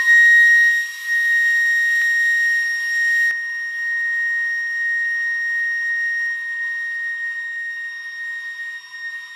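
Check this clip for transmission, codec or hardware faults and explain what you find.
Two faults are present in this music clip.

Dropped samples at 2.02 s: a single sharp click where the waveform jumps straight from one value to a later one. The likely cause is a handful of samples, well under a millisecond, going missing from the stream, far too brief to remove any audible material.

De-emphasis applied wrongly from 3.31 s to the end: a treble-cut filter meant to reverse pre-emphasis acts on audio that never had any boost. The response slopes smoothly downward, about 11 dB lower at 10 kHz than at 1 kHz, leaving the music dull and muffled.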